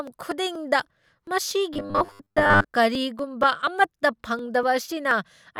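From 0.07 s to 5.35 s, the speech carries periodic USB or driver dropouts. Every 0.24 s, a short piece of audio goes missing. Each gap is around 10 ms. The missing audio is skipped, not replaced by silence, so the sound jumps ahead. Something is blocking the audio path on a fixed schedule. The result is a steady run of small ticks, about twenty in all, heard only while speech is present.

Between 1.74 s and 2.67 s, the speech turns robotic. A rigid, metallic buzz sits at 100 Hz. The speech still follows its rough shape underneath. This is likely robotic sound from repeated short buffers. Fresh audio arrives too slowly, so the last chunk plays again. The 100 Hz pitch fits a repeat of about 10 ms. Most of this stretch is repeated material rather than new audio.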